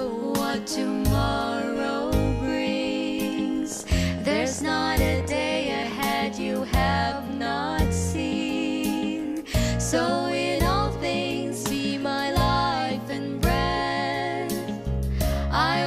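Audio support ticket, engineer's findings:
Train of clicks, 3.72 to 6.00 s. Around forty near-identical clicks, about 17.6 per second, irregularly spaced, roughly as loud as the programme and audible in pauses too. Likely external pulse injection from nearby equipment interference or a faulty connection or power supply.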